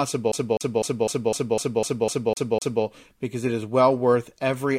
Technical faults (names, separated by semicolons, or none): CD stuck on one turn